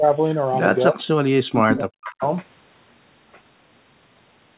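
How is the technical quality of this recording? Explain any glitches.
The recording has clear call-processing faults: the talker is repeatedly turned down, and a delayed copy of the sound leaks back. Throughout, the audio stops at 4 kHz, which fits narrowband G.711 mu-law telephone coding.

Speech suppressed in double talk occurs at 0.0 to 0.1 s with a dip of about 10 dB, and again from 0.89 to 2.22 s with drops of about 40 dB. The likely cause is an echo canceller that confused the talker with loudspeaker echo and attenuated everything. The sound sags and cuts out in pieces.

Echo leak appears at 1.69 to 1.79 s and 2.04 to 2.27 s. A copy delayed by 315 ms returns at about 5 dB and then about 15 dB below the speech. This is likely loudspeaker pickup that the far-end canceller failed to remove, heard as short ghost fragments.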